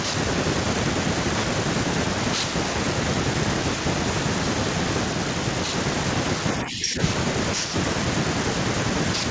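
Speech suppressed in double talk at 6.57 to 6.99 s: the speech dips by roughly 10 dB, likely because the echo canceller treated overlapping talk as echo.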